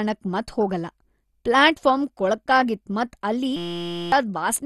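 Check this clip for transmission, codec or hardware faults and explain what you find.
Two faults are audible: codec damage across the whole clip, and a buzzing freeze near the end.

Throughout, the speech is dull with a gurgling, granular grit and nothing above 12.1 kHz. This is likely MP2 compression at a rate that fits about 64 kbps, where starved sub-bands switch off and flicker. Unlike a plain low-pass filter, the top end comes and goes and what remains sounds coarse.

From 3.56 to 4.12 s, just after "ಮತ್ ಅಲ್ಲಿ", a system hang loop replaces the sound with a steady 172 Hz buzz. The output kept replaying one 5.8 ms chunk, which fits a 256-sample buffer, and about half a second of audio is lost. A dropout would leave silence instead of this pitched tone.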